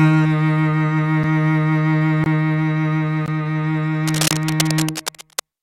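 Music, interrupted by gaps between stream segments: hard-edged silent holes at 1.23 s, 2.24–2.26 s, 3.26 s and 4.28–4.31 s, one per second, which fits 1-second segments. Unlike dropouts, nothing is missing; the music simply resumes later. From 4.05 to 5.41 s, cable scratch noise adds dense, irregular rustling bursts about 10 dB below the music, likely from a worn cable or connector being moved, unlike a steady hiss.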